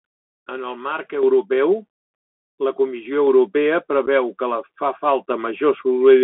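The whole clip carries the sound of a Bluetooth CVSD headset codec. The speech is confined to roughly 200 Hz to 3.4 kHz, consistent with a 64 kbps one-bit delta link. The spectrogram shows a hard ceiling near 3.4 kHz, sibilants sound scratchy, and a plainly audible granular hiss sits under everything.

At 1.23 s the microphone volume is stepped up by about 6 dB, and at 3.27 s by about 3 dB more. Each time the software raises the input gain at once, lifting voice and background together. The waveform envelope jumps to a new, higher plateau at each point.

From 4.06 to 4.08 s there is unconcealed Bluetooth headset packet loss, just before "que fa". A few voice packets, about 11 ms of audio, never arrived and nothing was patched in. The result is a brief hole with abrupt edges, visible as a sharp vertical gap in waveform and spectrogram.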